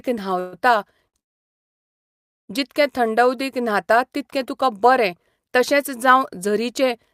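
At 0.39 to 0.55 s, a call audio freeze holds the last sound as a fading buzz or hiss for about 130 ms. Packets were likely delayed and the jitter buffer emptied.

At 1.08 to 1.15 s, a short stall from a late packet stretches a sound for 55 ms.

From 1.19 to 2.51 s, a second freeze falls almost entirely silent for about 1.3 s, likely from delayed packets. Nothing is lost. The speech resumes with "जितके थंड".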